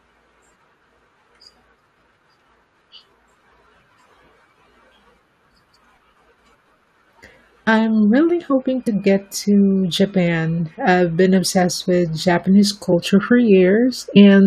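A speech clip with two kinds of playback fault. At 8.3 s there is a block of digital silence lasting only 0.67 ms, which fits 32 samples at a 48 kHz rate. The signal drops straight to zero and returns with no fade, so the two hard edges merge into a single sharp tick rather than an audible gap. Compressed frames skipped shows up twice: at 8.86 to 8.88 s, just before "get to", about 40 ms of speech is missing, and at 14.13 to 14.17 s roughly 20 ms goes. Here the decoder never plays whole frames, probably because they were lost or rejected as damaged, so the speech jumps forward in time. That forward jump is what separates these skips from the crisp tick of the zeroed block.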